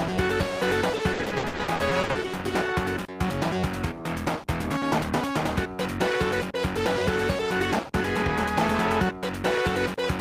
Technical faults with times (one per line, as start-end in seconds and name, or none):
0.97-2.17 repeated packet loss (robotic sound)